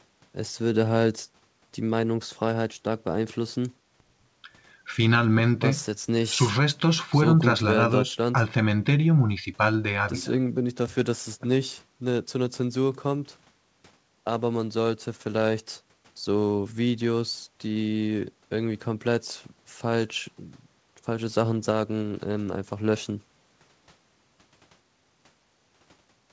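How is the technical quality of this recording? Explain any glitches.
No glitches to speak of here; the speech sounds like an ordinary call over what is likely a G.722 link, with nothing above 8 kHz, as that kind of connection gives, and nothing going wrong along the way.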